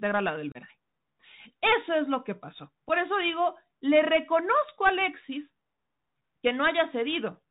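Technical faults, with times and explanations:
Throughout: Bluetooth CVSD headset codec. The speech passes through a narrowband headset link that sends one up-or-down bit per sample, so nothing survives above 4 kHz. On a spectrogram energy stops sharply at that line. S sounds turn scratchy, a granular hiss sits under everything, and loud peaks look slewed in the waveform.
0.52–0.57 s: unconcealed Bluetooth headset packet loss. Right after "la del", about 30 ms of audio is missing, roughly a few consecutive packets. The waveform drops to a flat or idle stretch with abrupt edges, and a thin vertical gap shows on the spectrogram. The speech cuts off, then returns briefly quieter.
2.89 s: unconcealed Bluetooth headset packet loss. Between "es lo que pasó" and "eso digo le reconozco", about one packet, 7.5 ms, is lost. It shows as a hairline gap in the spectrogram and a tiny flat notch in the waveform.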